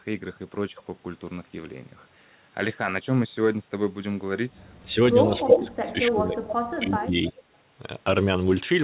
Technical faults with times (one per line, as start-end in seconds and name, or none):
4.88-4.97 speech suppressed in double talk
5.43-6.43 speech suppressed in double talk
5.49-5.67 echo leak
6.49-6.53 echo leak
6.77-7.38 speech suppressed in double talk